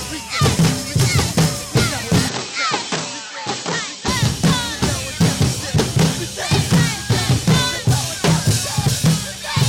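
A music clip: from 2.29 to 4.08 s it goes dull and drops a few dB, with nothing above 8.1 kHz, likely an input switched to a poorer device, with no gap at the changeover.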